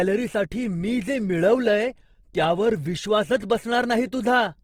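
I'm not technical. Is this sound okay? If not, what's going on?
No. All the way through, the speech sounds grainy and rough, with a hiss woven into it, the likely result of Opus compression squeezing the audio hard. Compared with MP3 damage, it swirls less; it just turns coarse and noisy.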